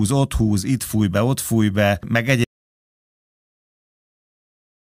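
A speech clip with an audio dropout to silence: right after "ott fúj be meg", at about 2.45 s, the sound cuts off mid-flow and never returns, leaving silence with no room tone through to the end. The likely cause is a lost input, such as a disconnected device, failed link or accidental mute, while recording continued writing silence. On a waveform the trace collapses to a flat line; a spectrogram goes completely blank.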